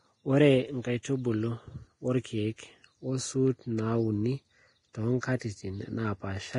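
Throughout, heavy lossy coding, likely Vorbis compression at a low bitrate near 30 kbps, removes everything above 10.6 kHz and coarsely quantises the treble, leaving the speech hissy and grainy. From 5.21 to 5.23 s, pre-echo appears: quantisation noise from a coded block spreads back before a sharp attack, so about 23 ms of hiss precedes it and the onset sounds smeared.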